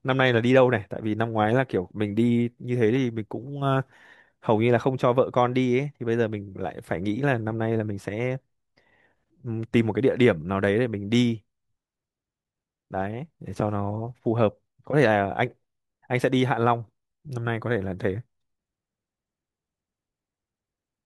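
No technical faults can be heard anywhere in the speech recording.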